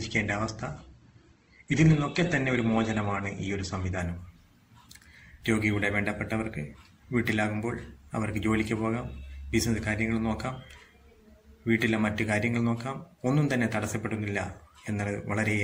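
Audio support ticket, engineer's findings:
Adaptive stream starting at a low bitrate, 0 to 4.0 s. Dull, band-limited start with nothing above 8.2 kHz and stronger codec artefacts, which fits a low-rate Opus tier of about 16 kbit/s. Player grabs the cheap rendition for fast startup, then switches up once it has measured throughput. At 4.0 s the top end opens up in one step, no gap, consistent with a jump to something like 64 kbit/s.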